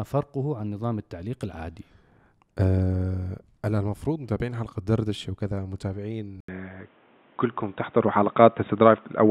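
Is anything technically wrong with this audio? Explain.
Yes. At 6.40 s, after an 80 ms gap, the speech loses everything above 3.8 kHz and gains new background noise. This is likely an input switched to a poorer device; the new noise rules out simple filtering.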